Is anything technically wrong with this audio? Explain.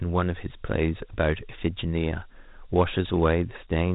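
Yes. Throughout, the speech carries Dialogic VOX ADPCM damage. Coding each sample as a 4-bit step change leaves a gritty hiss that tracks the speech, and nothing sounds above 3.8 kHz. The 32 kbps rate fits 8,000 samples a second. That speech-following grit sets it apart from clean telephone band-limiting.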